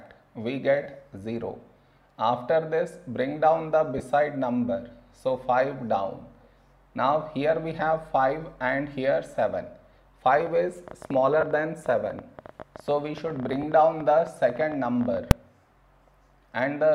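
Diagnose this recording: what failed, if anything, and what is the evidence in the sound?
Lost LE Audio frames at 0.83 to 0.86 s (30 ms), 3.98 to 4.00 s (20 ms), 11.41 to 11.43 s (20 ms) and 13.63 s (10 ms). This is a codec and Bluetooth link fault. Each gap becomes a brief noisy smear where the tonal content should continue, which fits runs of one to three lost 10 ms frames. The LC3 decoder concealed each loss by replaying the last good spectrum with randomised phase signs. All four losses are short enough that no fade-out to silence develops.

Train of clicks from 10.37 to 15.18 s. Ticks arrive at about 12 per second with irregular spacing, roughly fifty in all. They have much the same shape and peak a few dB above the surrounding sound, so they stay audible in quieter moments. The cause is likely interference from nearby equipment or a struggling interface injecting repeated pulses into the analogue wiring or converter path.

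Invalid numbers at full scale at 15.31 s. A single loud bang lasts about 2.9 ms, which fits one 128-sample processing block. In the processing or sample-format conversion stage, a calculation produced infinite or invalid values. These were clamped to maximum positive or negative output, so the whole block was forced to full scale. The block is too short for separate onset and offset pops, so it is heard as one bang.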